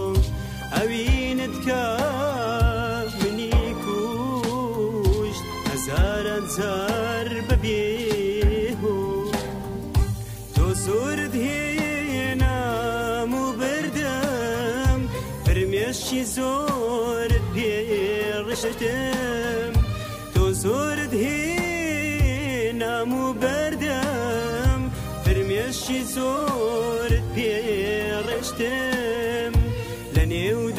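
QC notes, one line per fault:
18.54–18.74 s and 26.36–26.42 s, frames out of order: neighbouring blocks of audio frames were delivered swapped and decoded as received, about 93 ms per block in the first, about 23 ms in the second (consistent with single 23 ms frames). Each stretch plays with its halves exchanged, giving a brief garbled flutter. No time is lost.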